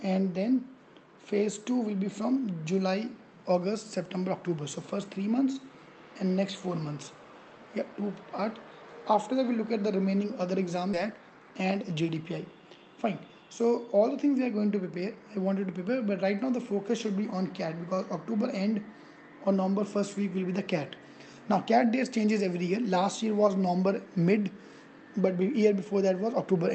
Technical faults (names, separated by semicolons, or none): skip ahead; jitter buffer speed-up